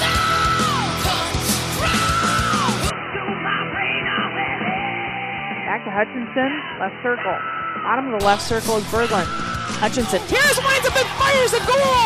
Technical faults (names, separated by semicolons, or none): input switched to a poorer device